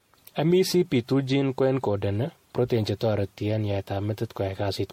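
The speech sounds swirly and hollow throughout, with blurred attacks and nothing above 16.5 kHz. Likely generation loss: roughly seven MP3 passes near 64 kbit/s.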